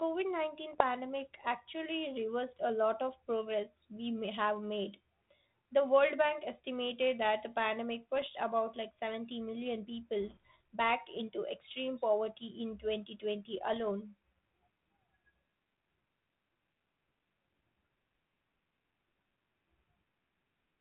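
Bit errors on an ADPCM link strike at 0.71 to 0.82 s, 3.96 to 4.00 s, 8.22 to 8.26 s and 13.73 to 13.83 s. Each flipped bit throws off the decoder's step size and predictor, so the damage rings on briefly as pops, rough bursts and momentary jumps in level.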